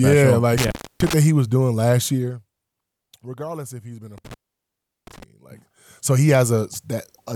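A speech clip with intermittent contact: a loose cable or plug breaks the line twice, so the sound drops out with crackle at the edges, first from 0.58 to 1.14 s (open for about 0.30 s, just before "that he was doing"), then from 4.18 to 5.23 s (open for about 0.73 s, just after "if he's been a").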